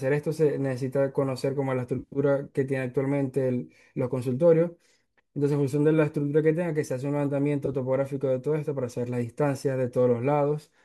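Speech with AAC frame loss with concealment at 1.99–2.19 s and 7.66–7.74 s, heard as brief smeared, phasey patches where the likely low-delay AAC stream dropped frames and the decoder filled them in. On a spectrogram these show as blurred horizontal smears that interrupt the harmonic detail.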